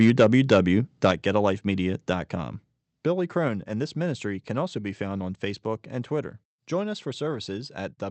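A speech recording, carried over a call link whose codec limits the top end to around 8 kHz, opens with microphone overload from 0.01 to 0.57 s and again from 1.04 to 1.1 s. The loudest peaks are flattened at the converter's ceiling, roughly 5 dB and then about 4 dB beyond what it can represent, giving a hard, crackly edge to those syllables. A few percent of samples in the first stretch are squared off and slightly fewer in the second, which points to the input gain likely being set too high for the talker's level. Twice the microphone volume is stepped down: at 0.1 s the whole signal, voice and room together, drops abruptly by about 2 dB, and at 1.11 s by about 5 dB, right after the second distorted burst. Each drop is an instant level change rather than a fade, likely the signature of call software reacting to the clipping by cutting the device's input gain in one move.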